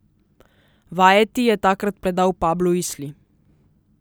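At 1.86 s there is a single sharp click in the speech. It sounds like dropped samples. A tiny sliver of the signal, well under a millisecond, is likely missing from the stream. The waveform jumps straight from one value to a later one. That sudden step makes the click. The gap is far too short to remove any sound. On a spectrogram it appears as a thin vertical line across all frequencies.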